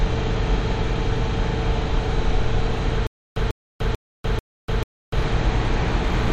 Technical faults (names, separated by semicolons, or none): stutter with silent gaps